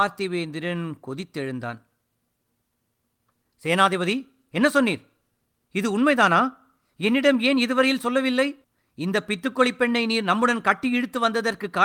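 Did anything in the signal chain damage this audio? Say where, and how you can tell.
Nothing stood out on listening to this speech that would point to damage anywhere in the signal chain.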